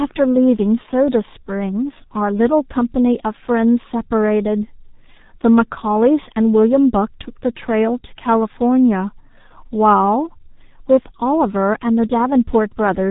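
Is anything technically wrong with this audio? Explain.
Yes, the whole clip has been through the G.723.1 codec, and it's heavily damaged by it. This old internet-telephony codec chops speech into 30 ms frames and sends only a coarse vocal-tract model plus excitation, so the model can't keep up with fast changes. Nothing comes through above 3.8 kHz, which leaves the speech muffled and hoarse, with smeared consonants. The heaviness fits the very low 6.3 kbit/s rate.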